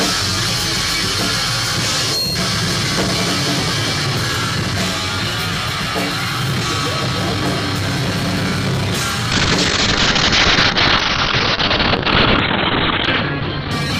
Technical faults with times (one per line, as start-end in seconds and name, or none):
9.32-13.99 call bitrate drop